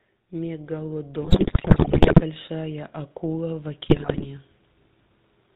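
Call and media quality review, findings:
GSM full-rate codec, whole clip: buzzy, gravelly speech with nothing above 4 kHz. A crude vocal-tract model driven by sparse, evenly spaced pulses, keeping just every third excitation sample. The sound fits the old 13 kbps full-rate coder, and the damage is plainly audible.

Automatic gain rising, 0.39 to 4.52 s: level climbs about 9 dB, with speech and background swelling together. The AGC decided the input was too quiet and kept nudging its gain up slowly over roughly four seconds.

GSM bit errors, 1.22 to 2.22 s and 3.86 to 4.26 s: squawks, pops and gargling. A weak radio link flipping bits into the decoder, where corrupted filter, pitch and gain values warp the spectrum or spike the level frame by frame. The first burst is longer and rougher.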